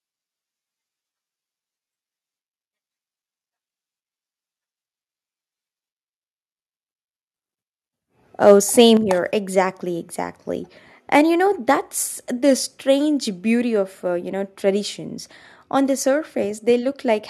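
Between 8.46 and 8.52 s, and again from 8.79 to 8.83 s, the loudest speech peaks are flattened and take on a harsh, crackling edge. This is likely microphone overload: the input drives about 2 dB past the converter's ceiling, squaring off a small fraction of the waveform.

At 8.97 s, right after those distorted peaks, the voice and background both drop about 6 dB in one step, which points to the microphone volume being stepped down by software that likely reacted to the clipping. A smaller drop of about 2 dB follows at 12.03 s, between "you know" and "the strange beauty of".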